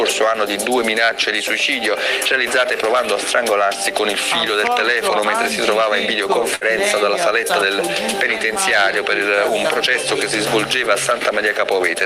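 At about 6.55 s there's a burst of packet loss: roughly 57 ms gets filled by stretching and fading the last sound, then the audio skips ahead, about 60 ms gone.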